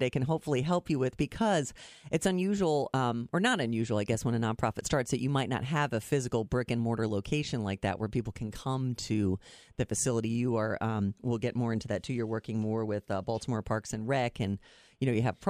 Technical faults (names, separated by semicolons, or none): none